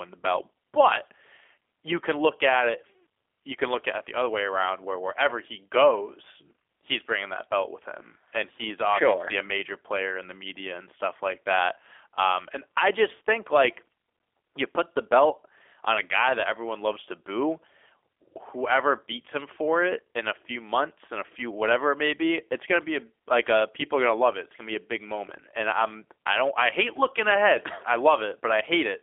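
Speech throughout shows G.729 codec damage: a rough, slightly synthetic quality that fits an 8 kbit/s model-based coder, with the sound rebuilt from a vocal tract filter plus sparse pulses. On a spectrogram the energy sits between 300 Hz and 3.5 kHz, with nothing above 3.6 kHz.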